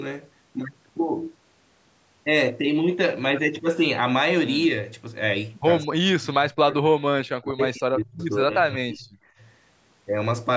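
From 5.87 to 8.2 s the speech sinks and breaks into fragments, over about two seconds in total, at its deepest falling by roughly 40 dB, with the top end dulled. A shorter, shallower dip follows from 8.41 to 9.14 s, about 25 dB down. This is likely speech suppressed in double talk: the echo canceller, hearing both sides at once, mistook this talker for returning loudspeaker echo and turned it down, under a band that already stops near 8 kHz.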